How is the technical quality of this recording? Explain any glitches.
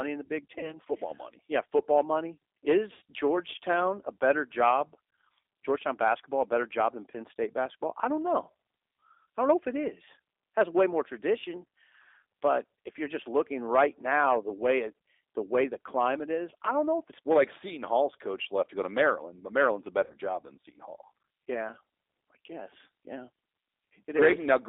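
The technical quality is limited by a narrowband voice codec, and the speech has three short dropouts.

The G.729 codec runs for the whole clip. This speech is audibly coded at 8 kbit/s. The line is narrow, from 300 Hz to 3.7 kHz, so there is no bass and no sibilant sparkle. The decoder rebuilds each frame from a vocal tract filter, a pitch predictor and a few pulses. That gives a rough, slightly synthetic edge that is plainly audible.

VoIP packet loss concealed by the speech codec occurs at 0.59 to 0.77 s, 2.93 to 3.02 s and 20.04 to 20.14 s. About 40, 80 and 60 ms of audio went missing. That fits two, four and three lost 20 ms packets. The decoder stretched its last pitch and filter, with the gain falling frame by frame. Each gap sounds like a brief buzzy or noisy smear that fades, and the speech stays weak for a moment after it.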